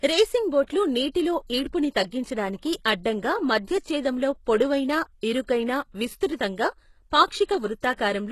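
Throughout, s sounds turn gritty and metallic, with nothing above 12.3 kHz. This is likely HE-AAC compression rebuilding treble from lower bands, at a bitrate that fits about 16 kbps.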